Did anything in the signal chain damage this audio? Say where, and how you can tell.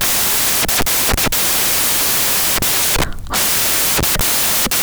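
Yes, at the sample-format conversion stage. The whole speech clip is buried under loud, broadband noise from start to finish. That pattern points to samples built from the wrong bytes. The reader assembled each sample with its bytes misordered or misaligned. The rapidly changing low-order bits landed in the high-order position. Tiny fluctuations became large swings, and the real waveform was reduced to noise.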